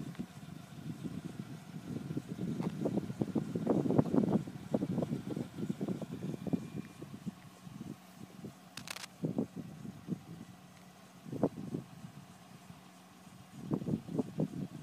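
At 8.77 s a burst of cable scratch noise breaks in and lasts until 9.06 s, just under a third of a second. It sounds like harsh scratching and rustling laid over the audio. The bursts are dense and uneven, and they sit only slightly below the main sound. The likely cause is a worn cable, plug or control being moved, its contact resistance jumping rapidly as it shifts.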